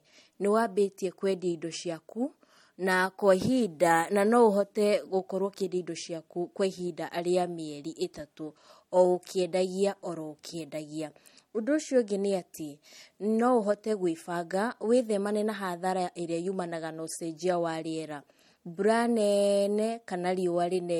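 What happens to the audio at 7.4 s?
At 7.4 s you're hearing the same thing that runs through the whole clip: low-bitrate audio saved at a high bitrate. The speech carries the artefacts of a low-bitrate MP3 encode, and nothing above about 18.3 kHz. What's likely going on is that it was first squeezed through a low-bitrate MP3 encode, roughly 48 kbit/s by the sound of it, and then re-saved at a much higher rate. That second pass can't bring back what the first one threw away.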